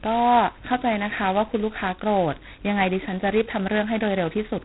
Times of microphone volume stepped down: none

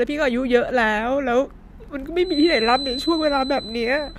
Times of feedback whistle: 2.19-4.19

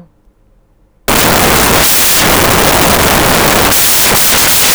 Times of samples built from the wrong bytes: 1.08-4.75

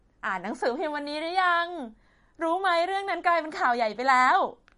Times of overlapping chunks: none

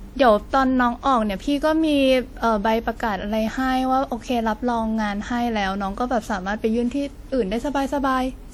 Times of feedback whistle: none

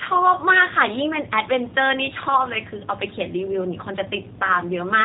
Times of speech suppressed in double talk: none

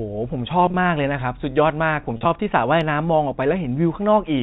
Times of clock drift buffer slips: none

